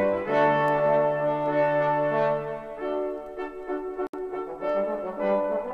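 At 4.07 s the sound drops out. A silence of 66 ms opens, lasting until 4.14 s. This is a gap at a join of encoded pieces. The audio was encoded in separate parts and then joined untrimmed. One part's padded final frame and the next part's start-up delay both stayed in. The codec smears the edges of the gap, so the fully silent part is shorter. After it, the sound resumes exactly where it stopped.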